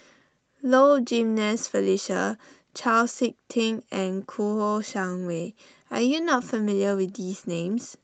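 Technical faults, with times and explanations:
Throughout: clock drift between sender and receiver. The sending clock runs roughly 2 percent slow relative to the receiver, so the jitter buffer in this Opus call path keeps draining and the receiver must pad the audio to avoid running dry, leaving small, irregular timing hiccups.
0.30 to 7.76 s: repeated timing corrections. The receiver repeatedly duplicates short fragments, all in the stretching direction and unevenly spaced, adding around a fifth of a second in total. The sound plays at 98 percent pace, each edit small enough to pass as at most a slight hiccup.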